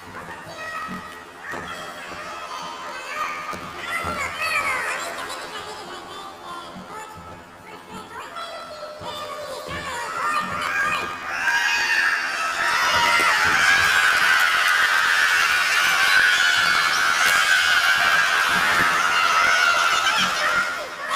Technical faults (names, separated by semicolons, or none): planar audio read as interleaved